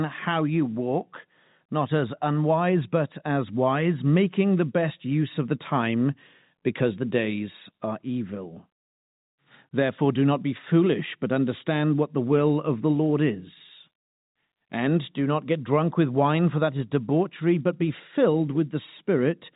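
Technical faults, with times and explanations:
No faults turn up in this speech, which just sounds like an ordinary G.711 telephone line, with the usual phone bandwidth topping out around 3.8 kHz.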